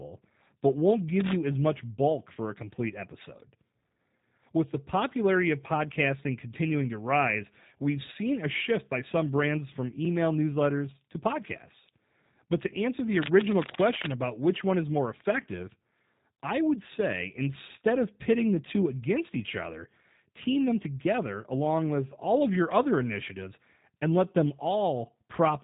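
The whole speech clip carries G.729 codec damage. The sound is rebuilt from a vocal tract filter, a pitch estimate and a few pulses per frame. Nothing passes above 3.8 kHz. The result is plainly rough and synthetic, which fits an 8 kbit/s VoIP stream.

Cable scratch noise appears twice. From 1.20 to 1.38 s, between "but won't" and "as much bulk for", a dense, uneven rustle sits over the speech. It returns from 13.22 to 14.13 s, after "answer the" and before "about which one is", this time longer. Both bursts are only a few decibels below the speech. The likely cause is a worn cable or connector being moved, with its contact resistance jumping rapidly.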